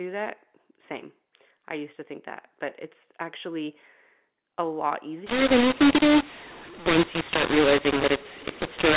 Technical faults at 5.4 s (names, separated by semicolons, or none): mu-law and A-law mixed up